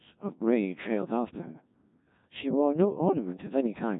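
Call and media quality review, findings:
Robotic, buzzy speech throughout, nothing above 3.8 kHz. Codec 2 vocoder, heavy damage, fits 1.6 kbit/s mode: voice resynthesised from sine waves using pitch, voicing, energy and envelope only.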